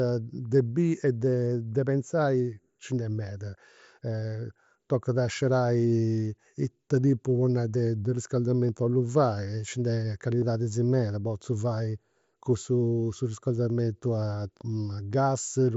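At 8.68 s and 10.41 s, concealed Bluetooth headset packet loss patches gaps of 7.5 and 15 ms, fitting one then two lost packets, by repeating a best-matching recent stretch. The first is nearly inaudible. Waveforms show a brief copied cycle, spectrograms a faint smeared column.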